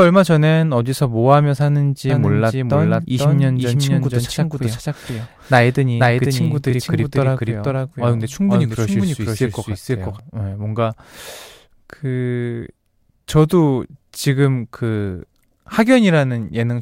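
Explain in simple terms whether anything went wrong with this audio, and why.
From 2.09 to 10.19 s the speech plays twice, a quieter copy about half a second behind: a doubled audio track, likely recorded twice. Unlike a room echo, the copy never fades and starts and stops abruptly.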